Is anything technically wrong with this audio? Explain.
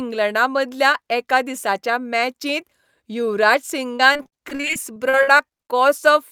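Yes. From 3.97 to 5.61 s the speech suffers repeated packet loss, giving a robotic sound: sixteen short gaps, the longest 47 ms, are patched by extending the preceding sound, covering about a quarter of that stretch and leaving it choppy with pieces missing.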